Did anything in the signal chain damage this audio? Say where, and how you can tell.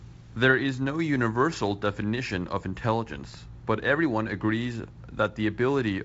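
No, nothing in the chain did any damage here; what you hear is just G.722 wideband telephone coding doing its normal job, with the top end stopping at about 7.7 kHz and the light coding grain you'd expect from something around 56 kbit/s.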